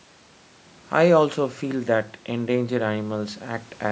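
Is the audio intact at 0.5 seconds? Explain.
Yes, the speech at 0.5 seconds is intact, with nothing wrong beyond the ordinary band-limiting of call microphone processing, which leaves nothing above 8 kHz.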